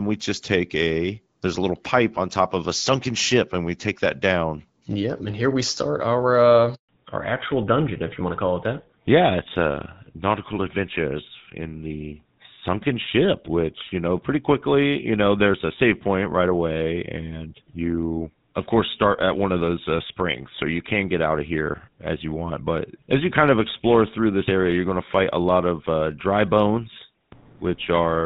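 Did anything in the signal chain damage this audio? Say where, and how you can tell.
Yes. At the network stage, a handover gap from 6.75 to 6.89 s: no speech frames arrived while the call switched networks, so the sound drops out for 140 ms.

At the codec stage, a fallback to narrowband from 6.89 s onward: the clear wideband coding gives way to an older codec. Nothing remains above 4 kHz, leaving speech duller and rougher.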